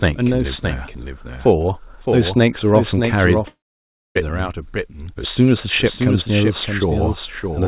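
From the start, the speech carries a doubled audio track: a second full-band copy trails the original by roughly 0.7 s, only a few dB quieter. It is most likely a second capture through a slower path or two misaligned copies in an edit. Unlike acoustic echo or reverb, the copy has no decay and no room colour. It is a clean, equally bright repeat, so the speech seems to overlap itself rather than ring.

At 3.48 s comes a long network dropout, likely from audio that never arrived. The receiver keeps the last sound going as a fading buzz or hiss, and after a short moment that gives way to silence lasting about 0.6 s. Speech resumes at 4.17 s with roughly 0.68 s of material missing. That loss, plus the concealment tail, separates it from a simple mute or a momentary glitch. Everything sits below 4 kHz, which fits a G.711 mu-law call link.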